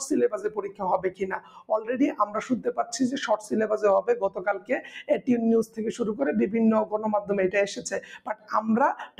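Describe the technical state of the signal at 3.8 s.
At 3.8 s a speech-tuned noise suppressor is still active, as it is for the entire clip, treating sustained tones, ambience and decay as noise. Onsets pass while held sound and tails are pulled down by around 15 dB, so the level pumps and thins.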